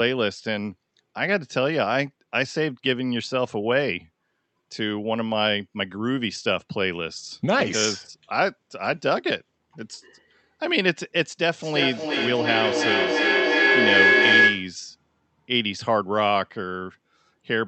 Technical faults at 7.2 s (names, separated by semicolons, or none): none